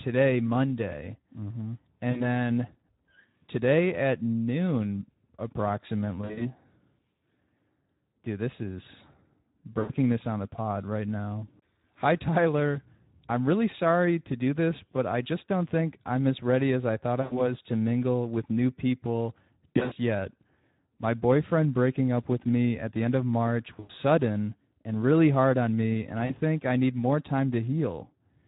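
Throughout, the speech carries Speex codec damage that is plainly audible: a hoarse, noisy grain, which points to a low setting around 11 kbps. The CELP coder has too few bits to shape the excitation, so the voicing turns rough. A plain bandwidth limit would only dull the sound, while this damage roughens it. Any top band heard is a shaped hiss rather than real detail.

VoIP packet loss concealed by the speech codec breaks in at 2.11 s (40 ms missing), 6.21 s (120 ms scattered over about 200 ms), 9.79 s (100 ms, just before "this on the pod"), 17.21 s (100 ms, between "ready as I thought" and "to mingle with new"), 19.69 s (180 ms scattered over about 240 ms, the worst), 23.79 s (100 ms) and 26.25 s (40 ms, between "hard on me and" and "think I need more"). At each gap the decoder keeps repeating its last pitch and filter at falling gain, so the voice smears into a buzzy tone or coloured noise that fades. 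It stays weak for a short while after packets return. A plain dropout would go silent or click instead.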